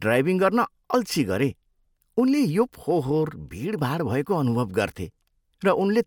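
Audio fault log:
No faults heard anywhere in this speech recording.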